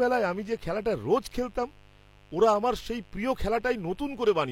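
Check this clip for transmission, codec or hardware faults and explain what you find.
A steady, raspy mains buzz runs under the speech from start to finish, sitting roughly 30 dB below it. It comes from switching spikes on the 50 Hz supply, twice per cycle, whose harmonics climb well into the kilohertz range.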